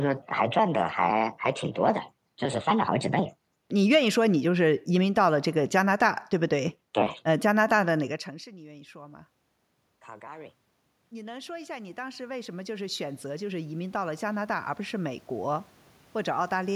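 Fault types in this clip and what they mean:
automatic gain rising: The gain control saw the input drop by about 24 dB after the talker moved back near 8 s, and from 9.84 to 16.71 s it slowly raised its gain by about 15 dB, so voice and room noise swell together.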